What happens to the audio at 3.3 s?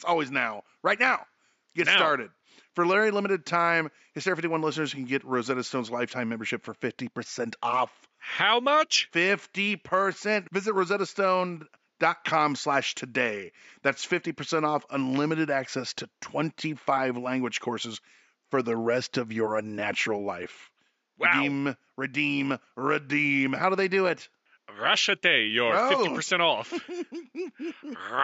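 At 3.3 s the speech carries on intact, with nothing wrong in the signal path and only the faint room noise sitting far below it, about 53 dB down.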